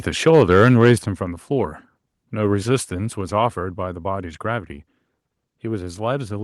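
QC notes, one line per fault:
0.27–0.89 s, microphone overload: loudest syllables carry a harsh crackling edge with flattened tops, likely input set about 2 dB too hot, clipping a few percent of samples, unlike codec distortion.
1.02 s and 3.21 s, microphone volume stepped down: voice and background together drop abruptly, by about 6 dB then about 3 dB, likely the call software lowering input gain after clipping, unlike a fade.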